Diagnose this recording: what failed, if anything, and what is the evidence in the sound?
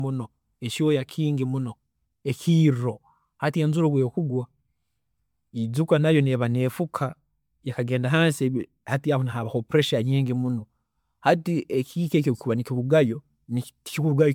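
Codec, likely generation loss: swirly, hollow smearing and blurred attacks throughout, worse than one MP3 pass near 130 kbit/s explains, suggesting about five re-encodes.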